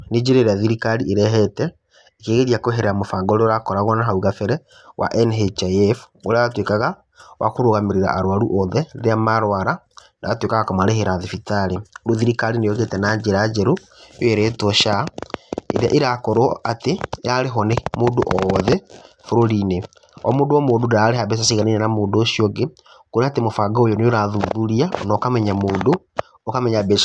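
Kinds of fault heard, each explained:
Nothing stood out as a problem on listening to this speech recording.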